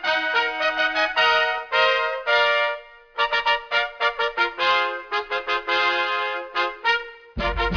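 Aliasing runs through the whole piece of music. The rate was reduced without an anti-alias filter, which fits a drop to about 11 kHz, so content above 5.5 kHz folds back as unrelated, gritty tones roughly 20 dB below the music.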